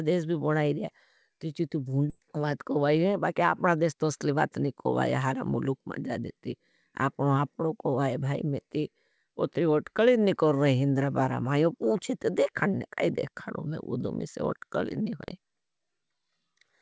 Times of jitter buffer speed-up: 2.20-4.62

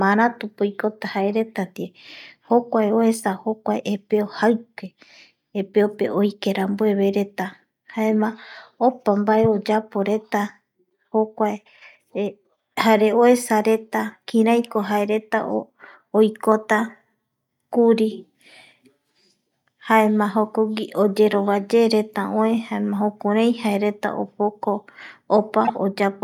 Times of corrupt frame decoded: 25.65-25.70

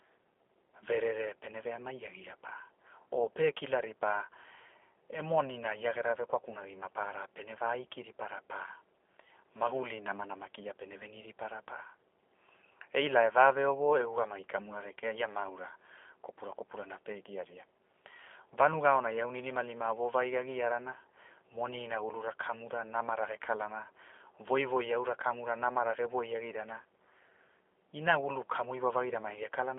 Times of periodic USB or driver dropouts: none

